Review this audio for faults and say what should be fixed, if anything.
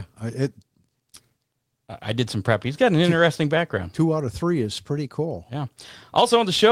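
No audible faults; nothing to fix.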